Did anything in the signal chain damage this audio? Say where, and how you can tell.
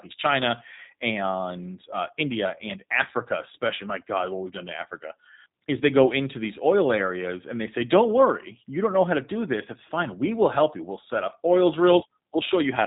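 Yes. G.729 codec damage runs throughout, at the codec stage. Nothing passes above 3.8 kHz, and the speech sounds plainly rough and synthetic, which fits 8 kbit/s G.729A: it is rebuilt from a vocal tract filter, pitch predictor and sparse pulses rather than sent as a waveform.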